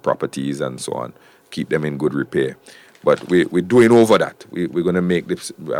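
No technical fault can be heard anywhere in this audio. Nothing in it points to a problem in how it was captured, processed or played back.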